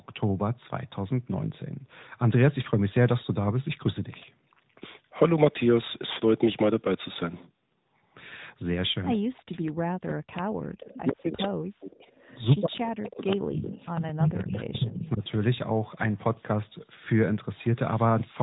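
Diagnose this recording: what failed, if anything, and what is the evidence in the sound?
Codec stage: the AMR narrowband mobile codec at 10.2 kbps runs throughout. Nothing passes above 3.8 kHz, and the speech sounds buzzy and synthetic.

Call processing: the speech is suppressed in double talk at 9.14–10.65, 11.09–12.06 and 12.57–15.23 s, dipping roughly 40 dB. This is likely an echo canceller ducking both talkers.

Call processing: an echo leak is heard at 9.66–9.71, 11.40–11.47 and 12.15–14.29 s. A copy trails by 98 ms, from about 25 dB down to about 10 dB below the speech. The likely cause is loudspeaker echo escaping cancellation.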